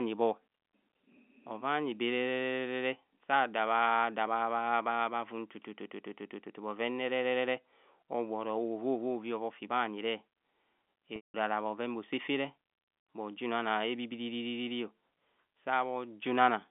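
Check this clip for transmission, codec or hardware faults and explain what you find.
One fault, a packet loss with pitch repetition, runs from 11.16 to 11.34 s in this speech, which is carried on a G.711 telephone line limited to 200 Hz to 3.5 kHz. About 180 ms went missing, which fits roughly nine 20 ms packets. The receiver looped the last pitch period and then faded it out, so the sound holds on a brief buzzy tone, sinks into silence and returns through a short cross-fade. On a spectrogram, frozen horizontal harmonic lines fade into a blank gap. On the waveform, identical repeating cycles shrink to a flat line.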